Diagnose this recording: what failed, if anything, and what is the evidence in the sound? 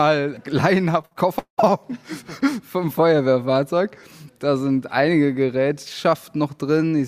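Repeated packet loss (robotic sound) at the network stage, from 1.01 to 1.71 s: four gaps, the longest 191 ms, with about half the stretch patched by extending the preceding sound. That smeared fill, rather than clean silent holes or clicks, separates it from a buffer dropout.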